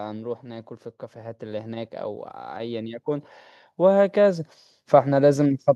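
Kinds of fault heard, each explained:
Automatic gain rising: the gain control judged its input too quiet and pushed its gain up slowly, so the speech and the background noise swell together, by about 5 dB from 0.42 to 2.0 s and again by about 6 dB from 2.53 to 4.53 s.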